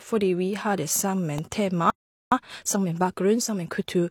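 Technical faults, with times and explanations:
1.38 s, electrical switching spike: just after "vi har det" a sharp snap sits on top of the speech without interrupting it, likely an arc from a nearby switch or discharge reaching the line. Unlike a data fault, nothing is lost or skipped; the click is simply added.
1.90 to 2.32 s, playback stall: the speech stops dead mid-flow for about 416 ms of silence, then resumes, likely because the player ran short of data or its thread was held up. It is a clean gap with no chirp, which sets it apart from corrupted data.
2.32 to 3.94 s, time-compressed catch-up: after the gap the speech runs about 1.25 times fast at unchanged pitch, as small pieces are cut out and cross-faded to clear the backlog. Because the pitch holds, this is not a sped-up tape or resampling error.
2.50 to 2.54 s, damaged data in a compressed stream: within the hurried section a brief glitch cuts across the speech as the decoder misreads broken frames and searches for the next header. 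Coming from the stream itself, it is distinct from the external switching snap.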